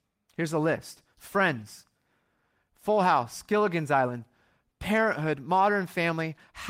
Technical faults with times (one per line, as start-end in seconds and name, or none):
none